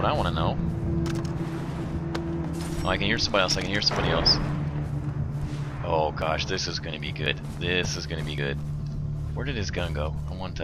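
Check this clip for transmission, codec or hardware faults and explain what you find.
Seven short skips occur, at 1.06, 1.84, 3.34, 4.68, 6.22, 7.26 and 8.38 s. Each is a jump where the sound skips forward with no silence. This is likely a dropped buffer (overrun): samples were overwritten before being read, so a chunk vanished and its edges joined directly. Most losses are around 20 ms, about 70 ms at 1.06 s and 40 ms at 8.38 s. The waveform shows an abrupt discontinuity at each point, and the spectrogram a thin vertical broadband line.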